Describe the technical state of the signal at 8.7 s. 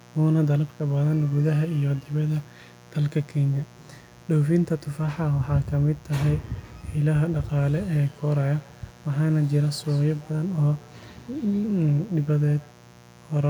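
At 8.7 s, two devices on the same call are sharing a room, so one plays back what the other's microphone sent and that microphone picks it up again. This feedback echo between two devices runs from 6.86 to 12.81 s. The speech returns roughly every 150 ms, thinner and more ringing with each pass, peaking at about 26 dB below the speech.

Underneath, and through the whole clip, a switching source such as a dimmer or rectifier is injecting spikes twice per 60 Hz mains cycle. This mains buzz spreads harmonics into the kilohertz range, giving a steady, raspy buzz sitting roughly 25 dB below the speech.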